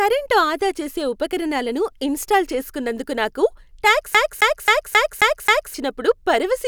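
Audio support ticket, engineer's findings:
Fast, even stutter in the speech, 4.14 to 5.74 s: same 267 ms slice repeats 6 times with brief mute per jump. CD stuck on one turn, scratch knocking laser back a track.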